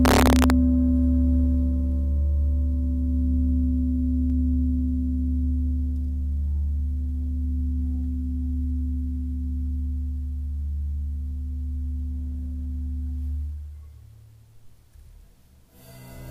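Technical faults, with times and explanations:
0.05–0.50 s, integer overflow: The loudest peaks exceed the integer limit by about 1 dB, and instead of being held at full scale they wrap around to the opposite extreme. Each overshoot therefore flips across the whole range, producing violent cracks rather than the duller, buzzy flattening of ordinary clipping.
4.3 s, dropped samples: A single sharp click appears where the waveform jumps straight to a later value, likely because a fraction of a millisecond of samples went missing. The loss is far too brief to be heard as a gap, which separates it from a dropout.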